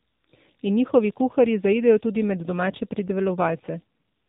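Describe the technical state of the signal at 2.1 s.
Converter idle tones are present at 2.1 s, as they are across the whole recording. Without dither, a delta-sigma converter fed a small input settles into repeating bit patterns, and those patterns form a steady tone instead of random noise. Here the tone sits at around 7 kHz, about 29 dB below the speech, and is heard as a faint high whistle riding over the sound and most exposed in quieter stretches.

The AMR narrowband mobile codec also affects the signal at 2.1 s and throughout. This mobile speech coder rebuilds the voice from a vocal-tract model excited by a few pulses per short subframe, with everything above 4 kHz removed. The damage is plainly audible: the speech is muffled, boxy and buzzy with a synthetic edge, which points to a low-rate mode around 7.4 kbps, where too few pulses are available to capture natural detail.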